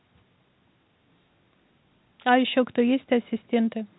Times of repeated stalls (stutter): none

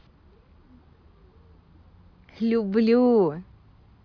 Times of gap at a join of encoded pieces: none

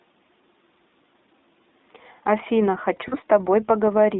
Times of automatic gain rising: none

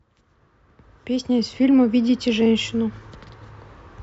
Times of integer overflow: none

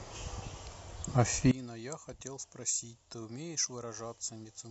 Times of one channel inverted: 1.51-4.71

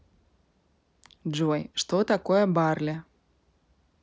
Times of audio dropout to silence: none

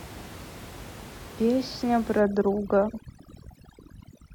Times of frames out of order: 2.89-2.99

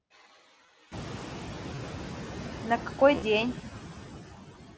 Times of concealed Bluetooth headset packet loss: 0.66-0.68, 1.75-1.78, 3.15-3.22

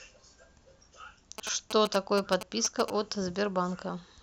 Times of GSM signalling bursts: 1.38-2.90

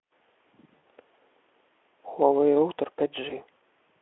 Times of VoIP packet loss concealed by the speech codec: 0.78-0.83, 3.29-3.34

